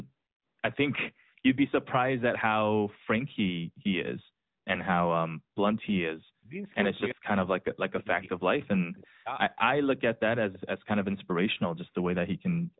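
The whole thing runs through the AMR narrowband mobile codec at 10.2 kbps, and you can plainly hear it. Nothing gets through above about 3.9 kHz, so the speech is boxed in and muffled, with that buzzy, slightly synthetic edge the low-bitrate vocal-tract model gives it.

From 6.13 to 6.63 s, 7.14 to 8.3 s and 8.55 to 9.3 s the talker sinks right down, around 40 dB at the deepest. That's likely speech suppressed in double talk: the echo canceller couldn't separate the talker from the far side and ducked both.

Then there are two short scraps of echo leak, at 9.03 to 9.07 s and 10.53 to 10.59 s. They're faint copies of the voice trailing about 331 ms behind, roughly 30 dB and 25 dB under the speech, most likely a speakerphone canceller letting a bit of pickup slip back.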